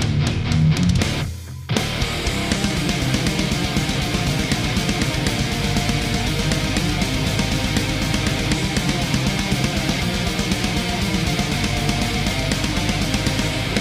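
From 0.62 s to about 12.6 s there are periodic USB or driver dropouts: every 2.0 s a tiny sliver of audio, a fraction of a millisecond, just gets skipped. That's a background task stalling the driver, heard as about seven small, evenly spaced ticks.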